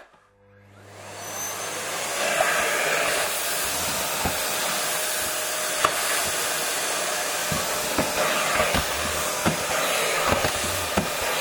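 Overlapping chunks first appear at 1.44 s and recur at 3.35, 5.37, 7.39 and 9.42 s: each 2.0-second chunk starts 23.22 ms early, replaying a sliver as a regular stutter-click. Damaged data in a compressed stream strikes between 2.40 and 2.42 s, where corrupted frames throw the decoder out of sync, producing a brief glitch.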